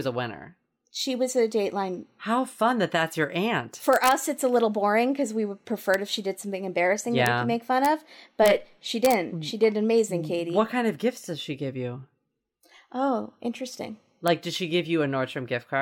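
Speech with integer overflow: loud peaks wrap past the largest integer to the opposite sign instead of being limited, causing violent cracks at 3.93–4.11 s, 5.94, 7.26, 7.85, 8.46, 9.05–9.13 and 14.28 s. These cracks are sharper than clipping's flattened, buzzy distortion because each peak flips across the full range.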